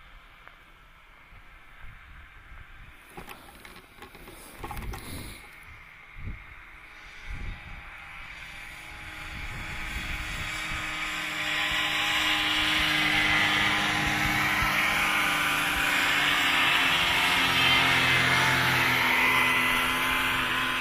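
A recording of sounds with no technical faults to report: the signal runs continuously with nothing added, dropped or altered along the way.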